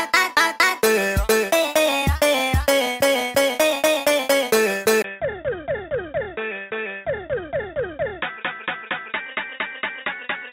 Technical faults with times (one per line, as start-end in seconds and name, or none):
5.02-10.52 input switched to a poorer device